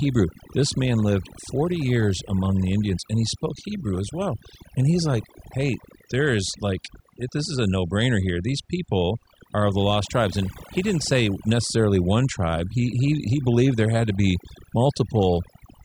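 From start to finish the speech carries overdone noise removal. The reducer was pushed too hard, so frequency bands sitting near its noise estimate get switched off, quieter bits of the voice included. You hear near-silent gaps with twinkly specks.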